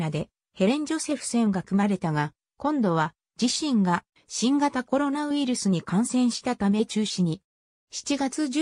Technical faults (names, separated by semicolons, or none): none